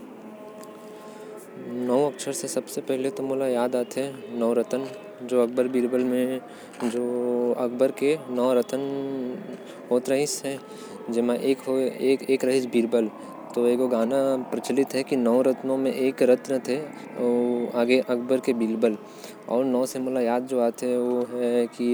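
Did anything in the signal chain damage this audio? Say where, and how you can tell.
No, nothing audible points to damage at any stage of the chain, from capture through to playback.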